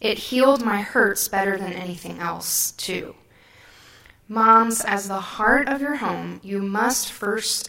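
Speech, with two problems running through it. First, there's a channel delay doubling the whole way: one channel arrives 40 ms behind the other, and once they're summed to mono the late copy sits right behind the original at the same level. You hear it as a doubled, slapback quality on every syllable. Second, there's a steady run of clock slip clicks from about 0.11 s to 7.69 s, a tick roughly every 30 ms, about 200 of them. That rate is fast enough to blur into a rattle under the speech. Each one is a single sample dropped or repeated. The likely cause is two devices on unsynced clocks drifting apart by something around 700 ppm, slipping a sample each time the error adds up to a whole one.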